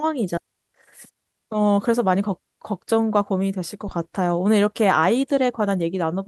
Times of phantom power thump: 3.88-4.26

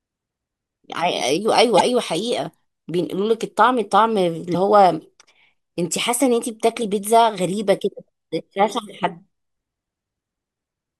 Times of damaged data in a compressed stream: 1.76-1.81, 4.51-4.55, 6.78-6.82, 9.00-9.04

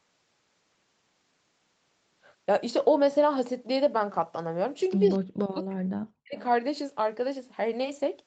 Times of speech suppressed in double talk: 5.21-5.88, 6.21-6.37

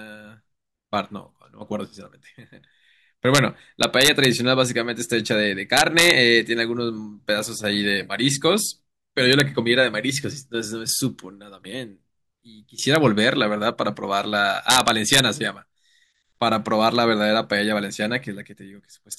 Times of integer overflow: 3.35-3.38, 3.83-4.25, 5.77-6.10, 9.33-9.40, 12.95, 14.70-15.20

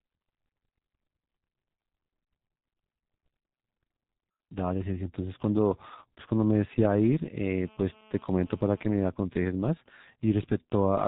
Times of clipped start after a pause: none

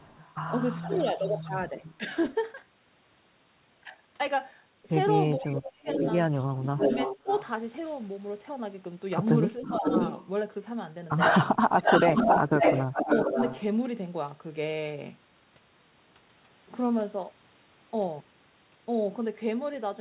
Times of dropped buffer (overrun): none

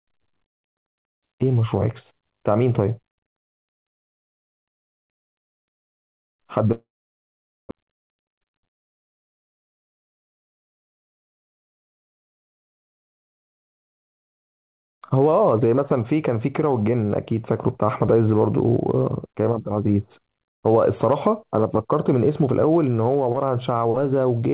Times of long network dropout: 6.72-7.73

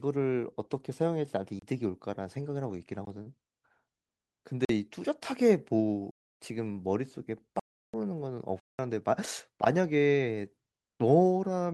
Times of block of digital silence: 1.59-1.62, 3.05, 4.65-4.69, 6.11-6.40, 7.59-7.94, 8.60-8.79

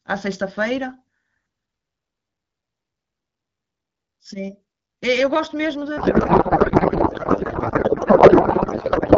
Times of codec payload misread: 5.97-9.18

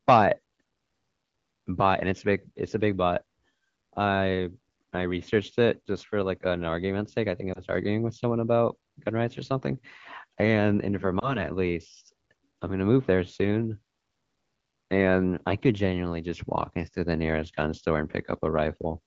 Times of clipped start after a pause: none

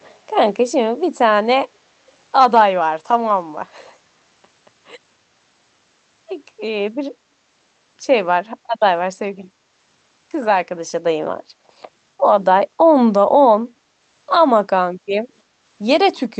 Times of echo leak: 0.00-0.18

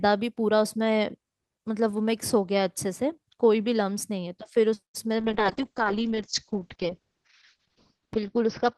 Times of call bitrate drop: 5.21-8.77

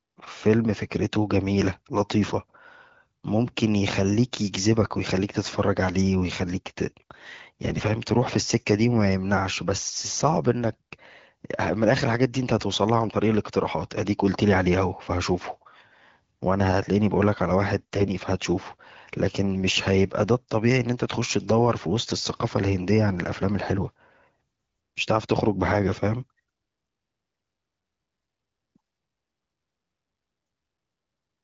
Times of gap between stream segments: none

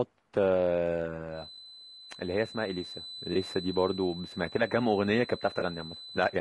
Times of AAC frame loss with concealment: 1.55-1.58, 3.33-3.36, 5.59-5.63

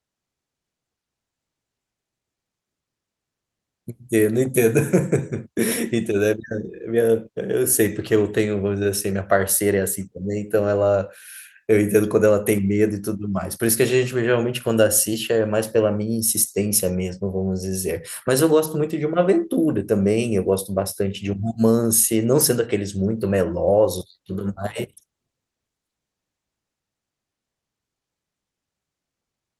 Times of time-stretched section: none

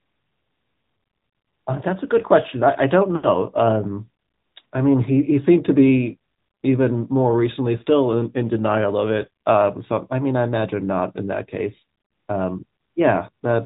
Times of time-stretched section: none

